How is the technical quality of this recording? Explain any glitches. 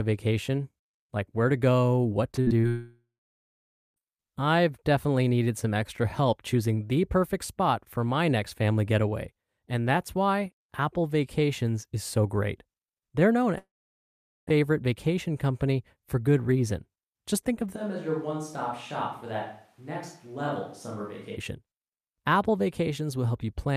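The recording has clear network glitches early on and a microphone problem near the end.

From 2.31 to 2.65 s there is repeated packet loss, giving a robotic sound. Five short holes, the longest 54 ms, are each patched by stretching the previous sound. About 40% of that span is filler, so the sound turns choppy.

Right after, from 2.69 to 3.98 s, comes a long network dropout, likely from audio that never arrived. About 1.3 s is lost. The last sound smears into a fading buzz or hiss, then roughly 0.9 s of silence follows. A second one runs from 13.58 to 14.49 s, losing 0.9 s, with about 0.8 s of silence.

From 17.77 to 21.35 s the sound abruptly turns hollow and roomy. This is likely a switch to a distant microphone. The level drops by about 10 dB, and room noise rises to about 30 dB below the speech. It snaps back just as suddenly.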